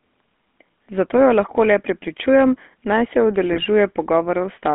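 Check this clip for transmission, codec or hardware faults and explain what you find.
Two faults here, one running the whole way through and one short burst near the end.

The whole clip has GSM full-rate codec coloring. Pulse-driven vocal-tract modeling, consistent with 13 kbps, leaves speech buzzy and gravelly, squeezed into roughly 200 Hz to 3.5 kHz.

From 3.52 to 3.65 s, just after "le prepričujem naj se", there are GSM bit errors. Corrupted filter, pitch and gain values garble several consecutive frames, giving squawky, gargling breakup and level jumps.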